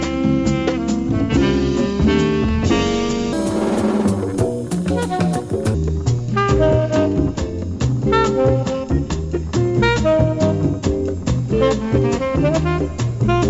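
From 3.33 s to 5.74 s the audio has a wrong sample rate fault. The samples are played faster than they were captured, with no rate conversion. Everything in that stretch runs about 1.38 times too fast. Pitch climbs by the same ratio, about 5.6 semitones. The sound turns thin, bright and rushed, then drops back at 5.74 s. That ratio fits 16 kHz material played out at 22 kHz.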